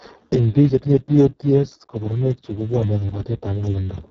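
Speex codec damage runs throughout: starved of excitation bits, the speech sounds hoarse and noisy, fitting a roughly 6 kbps setting, with nothing above 7.3 kHz.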